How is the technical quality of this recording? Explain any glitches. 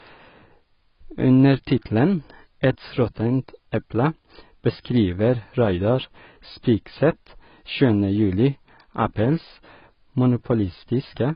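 The quality is poor, and the fault runs the whole length of the speech. Nothing is heard above about 5.1 kHz, so it sounds dull and muffled. The damage is heavy, with a smeared, watery texture on sibilants. This is likely AAC compression at a very low bitrate, around 16 kbps. The encoder drops the top band and coarsely quantises what remains, leaving gaps the ear hears as swirling.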